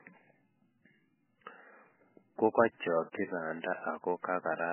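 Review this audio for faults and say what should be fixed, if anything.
Heavy MP3 compression is the likely cause: the encoder seems to have run far too short of bits, with damage that points to a bitrate around 8 kbps. It has cut off the top of the spectrum, so nothing above 3.1 kHz survives, and it has zeroed many weaker frequency lines, which flicker in and out between frames. Throughout the speech, that leaves a dull, band-limited, watery, swirling sound, with sibilants reduced to metallic chirps and consonant onsets smeared. To prevent it, keep the original recording, or encode at a much higher bitrate such as 128 kbps or above.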